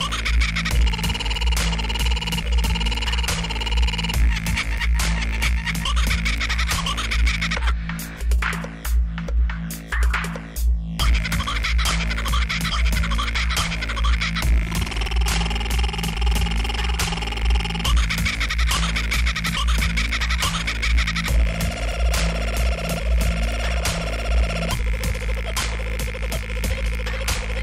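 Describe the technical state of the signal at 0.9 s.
At 0.9 s the signal is intact, with no dropout, distortion or other technical fault audible at that moment.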